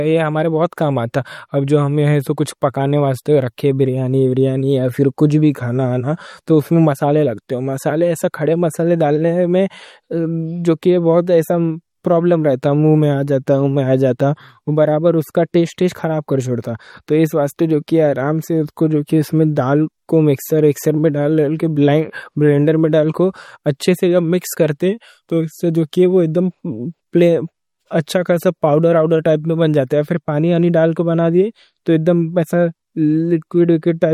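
Throughout the speech, plainly audible MP3 compression artefacts appear, likely from a low bitrate near 48 kbps. Weak frequency lines switch on and off between frames, giving a watery, swirly texture and smeared consonant attacks. A spectrogram shows nothing above 18 kHz and flickering, patchy high-frequency detail.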